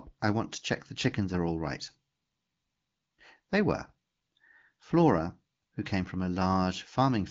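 No faults are audible anywhere in this speech.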